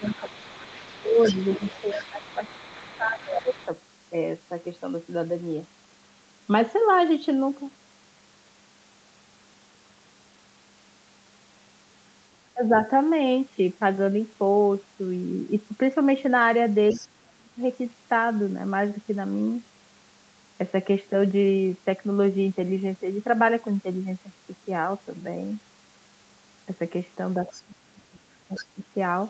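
Speech suppressed in double talk, from 0.0 to 3.57 s, at 12.54 to 12.74 s, 16.95 to 17.59 s and 27.57 to 28.82 s, likely arises when the echo canceller cannot separate the talker from loudspeaker echo during overlapping speech and turns both down. The speech dips by about 20 dB in the first two stretches and by about 35 dB in the last two, thinning or breaking into pieces.

The other side's voice leaking through, from 0.1 to 3.7 s, at 16.89 to 17.08 s, 27.46 to 27.62 s and 28.56 to 28.65 s, is likely residual loudspeaker echo the canceller missed. It comes through as a faint second voice roughly 15 to 25 dB below the speech.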